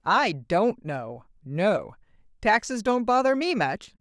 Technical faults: none

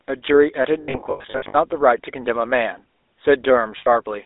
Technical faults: GSM full-rate codec; lost GSM frames

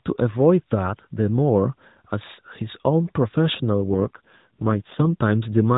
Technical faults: AMR rate drop

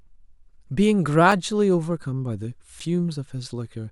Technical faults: block of digital silence

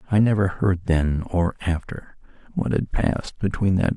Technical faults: none

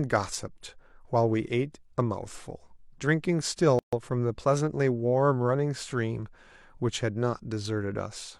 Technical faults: gap at a join of encoded pieces

